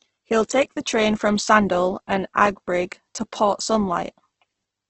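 A speech clip with heavy Opus compression throughout. It sounds grainy and rough, with nothing above 8.2 kHz. The cause is likely a low-rate Opus encode, around 12 kbps.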